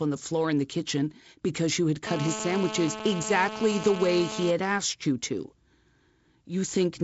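A hard, raspy buzz cuts into this speech clip from 2.07 to 4.51 s, starting after "kitchen because you had" and ending before "asked you to". It sits about 8 dB below the speech and holds steady throughout. This is GSM phone buzz: a nearby handset on a call transmitting bursts about 217 times a second, with the audio circuitry rectifying those pulses into a 217 Hz tone rich in harmonics. The speech itself carries the light coloration of G.722 wideband coding, with nothing above 7.7 kHz and some added noise that fits a 48 kbit/s mode.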